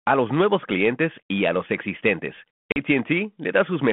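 A speech recording on a 32 kbit/s G.726 ADPCM telephone path has packet loss on an ADPCM call at 2.72 to 2.78 s, just after "y a los existentes." About two packets are lost, leaving a hard-edged 40 ms silent gap. Speech then returns slightly distorted while the decoder's adaptive predictor and step size fall back into step with the sender's.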